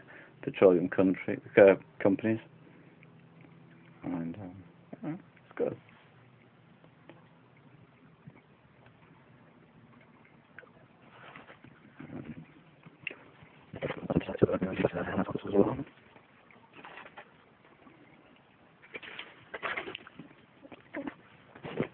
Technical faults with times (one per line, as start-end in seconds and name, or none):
none